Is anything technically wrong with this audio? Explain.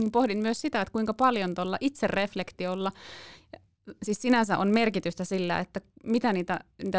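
Yes. Throughout the speech there is a fault consistent with a resampler restarted on every block. The conversion from 48 kHz down to 16 kHz was run on 20 ms blocks independently, so each block's filter started and ended without the real neighbouring samples, leaving a small error at every edge. Those errors repeat 50 times per second, giving a faint buzz at 50 Hz that rides on the speech and drops away in the gaps where there is no signal.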